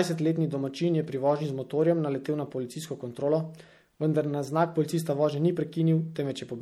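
Throughout the speech the sound is plainly watery and swirly, with dull treble, metallic chirps on s sounds and smeared consonant attacks. The likely cause is MP3 compression at a low bitrate, plausibly around 64 kbps: the encoder drops weak frequency lines frame by frame and cuts the top end.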